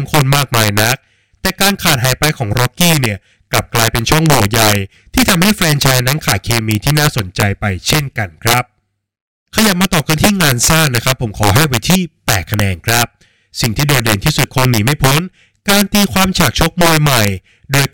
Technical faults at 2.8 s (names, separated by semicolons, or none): integer overflow